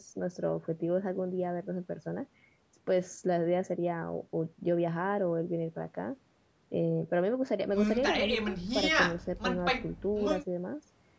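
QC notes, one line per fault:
No faults found; the speech carries the normal signature of a call's microphone processing, with the lowest bass trimmed by its high-pass filter and no content above 8 kHz.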